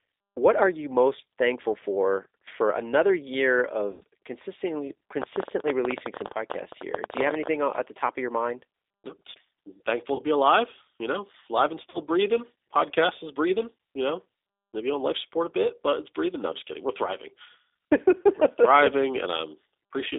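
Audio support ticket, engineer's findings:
G.729 codec, throughout. Speech band limited to about 300 Hz to 3.7 kHz, with nothing above 4 kHz. Rough, slightly synthetic texture consistent with G.729A at 8 kbit/s. The decoder rebuilds each 10 ms frame from a vocal tract filter, a pitch predictor and a few sparse pulses. The coding damage is plainly audible.

VoIP packet loss concealed by the speech codec, three events. 3.91–4.03 s, right after "for for another year": about 100 ms missing, which fits five lost 20 ms packets. 10.15–10.21 s, just before "be alive you know": about 40 ms. 11.90–11.99 s: about 40 ms. During each gap the decoder extends its last pitch and filter state, lowering the gain frame by frame. Speech stays weak briefly after packets resume.

Train of clicks, 5.22–7.48 s, ending just before "at the top of". Around forty similar pulses, about 16 per second, irregularly spaced. 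Peaks roughly 15 dB above the speech. Ticking is audible over the speech and in pauses. Likely cause: interference from nearby equipment or a faulty connection or power supply injecting repeated pulses.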